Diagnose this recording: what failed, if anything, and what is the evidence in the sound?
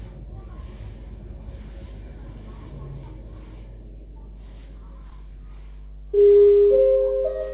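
Mains hum runs throughout, in the analogue wiring. A steady 50 Hz tone sits about 20 dB below the signal, from a ground loop or nearby transformer.

A short stall from a late packet occurs at the network and jitter buffer, from 5.10 to 5.14 s. The receiver held the last sound for 18 ms, then resumed without losing anything.

A jitter buffer slow-down follows from 6.15 to 6.47 s. Repeated short segments add 39 ms, so the sound plays at 89% speed with unchanged pitch. Above this, the G.711 call path cuts everything over 4 kHz.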